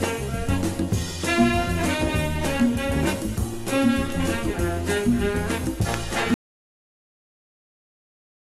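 At 6.34 s an audio dropout to silence cuts the sound off through to the end, likely lost input; the waveform goes flat and the spectrogram blank.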